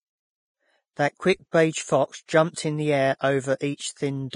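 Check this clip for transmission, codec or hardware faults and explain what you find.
One codec fault runs through the whole speech recording.

Vorbis compression, throughout: nothing remains above 10.5 kHz, and the upper range is hissy and grainy, with a roughened edge on voiced sounds and softened attacks on consonants. The likely cause is heavy Vorbis encoding at a low setting, which fits a bitrate of around 26 kbps. At that rate the encoder cuts the top band off entirely and quantises the remaining treble so coarsely that its fine detail turns into noise of similar energy.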